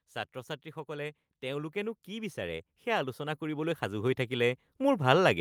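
From 0.05 s to the end, voice and background swell together: automatic gain rising, as the gain control judged the input too quiet and kept lifting it.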